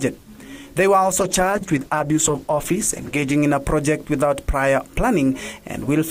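From 1.2 s to about 3.43 s the audio turns rough and muffled, losing its top end, before clearing again. This is a call bitrate drop. The encoder was squeezed to a far lower rate, which fits a fall from about 64 kbps to roughly 11 kbps. That forced coarser coding and a lowered high-frequency cut-off for about 2.2 s.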